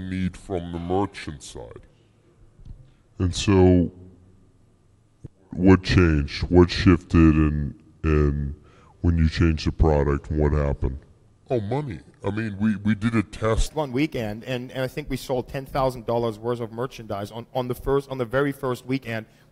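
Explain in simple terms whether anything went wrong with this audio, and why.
From the start to about 13.66 s there's a section at the wrong speed: it plays at 0.72 times normal, so everything drags and sits roughly five semitones low, likely from a clock mismatch.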